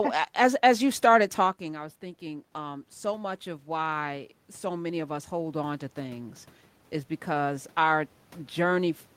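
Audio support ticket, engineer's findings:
Voice and room noise swell slowly together, 1.58–8.04 s, after "as as you started". Automatic gain rising: AGC adds about 12 dB after the talker's level drops about 13 dB.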